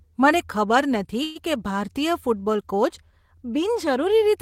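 At 1.23 s the speech stalls into a short buzzy tail that fades out until 1.38 s, a call audio freeze. That is likely packets arriving late and the jitter buffer running dry. About 121 ms of filler goes in, then the speech picks up where it left off, so nothing is lost.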